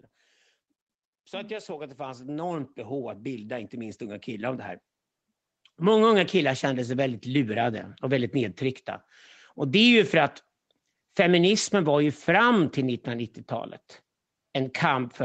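From 1.31 s to 4.61 s the automatic gain control raises its gain step by step, about 13 dB over a little more than three seconds, because it has judged the speech input too quiet. The speech and the background noise between phrases swell together, so the room floor climbs along with the talker. On the waveform the envelope widens steadily across that span. On the spectrogram the whole band brightens evenly, up to the 8 kHz ceiling that the call path sets.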